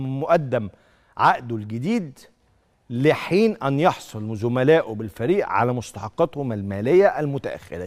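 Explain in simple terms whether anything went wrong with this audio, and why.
Nothing went wrong with this audio that a listener can hear. Across its roughly 7.9 seconds, nothing breaks in or changes unexpectedly.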